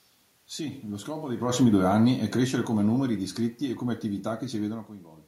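After "lo scopo", from 1.29 to 4.81 s, automatic gain falling: the control lowered its gain by about 6 dB, so the waveform envelope tapers steadily, room noise fading with the speech.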